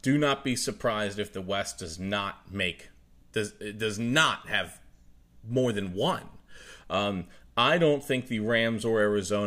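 No technical faults can be heard anywhere in the recording, which keeps a steady, continuous signal throughout.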